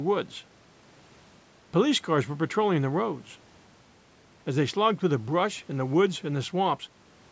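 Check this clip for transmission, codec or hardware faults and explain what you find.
No faults turn up in the speech; the signal carries the ordinary marks of a call's microphone processing, with the lowest bass trimmed by its high-pass filter and nothing present above 8 kHz.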